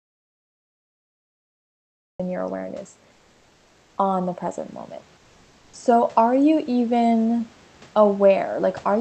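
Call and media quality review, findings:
Audio dropout to silence, 0 to 2.2 s: already under way at clip start; silent, no room tone, sound enters mid-flow at "your awareness". Input likely lost at capture or link while the encoder kept writing silence.

Comfort noise in place of the background, 3.11 to 3.97 s: after "your awareness", before "on the present moment". Real room background swapped for steady, featureless noise, about 2 dB quieter, over 0.86 s. Likely Opus DTX, with the receiver synthesising fill during a detected non-speech pause.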